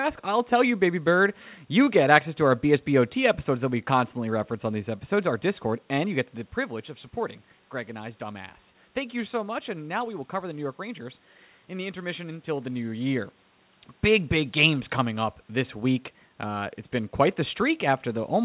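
Nothing goes wrong here; the room noise sits behind the speech, the level shifts around 6 s and 12.5 s are just the talker moving relative to the microphone, and the absence of anything above 4 kHz is the normal telephone-band sound of a G.711 mu-law call path.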